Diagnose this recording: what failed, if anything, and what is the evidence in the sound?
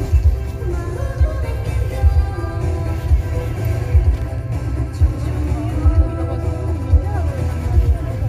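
Playback stage: CD scratch ticks, three brief clicks between 4.05 and 4.38 s, the longest around a millisecond, where disc damage once per revolution beat error correction.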